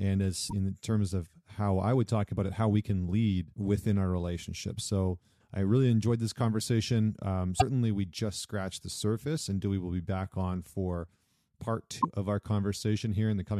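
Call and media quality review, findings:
Damaged data in a compressed stream: corrupted frames make the decoder lose sync and hunt for the next frame header. Brief blips at 0.46–0.53 s (before "terms of how I"), 7.56–7.62 s (before "we just scratched the") and 11.98–12.05 s (after "back on for part").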